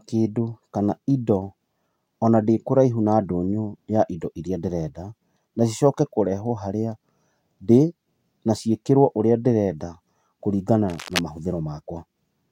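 Cable scratch noise breaks into this speech clip from 10.89 to 11.22 s, just after "ciĩkĩrwo ũrĩa ndĩrenda kũringana", as a dense, ragged burst of scratching roughly 10 dB below the speech. It likely comes from a worn cable or connector being moved, its contact resistance flickering rapidly.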